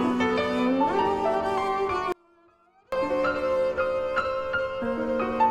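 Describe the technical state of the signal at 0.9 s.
The music at 0.9 s is intact, with no audible fault in the signal at that moment.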